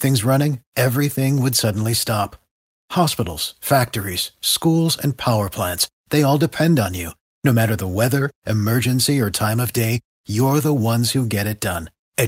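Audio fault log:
On listening to this speech recording, nothing stood out as a fault.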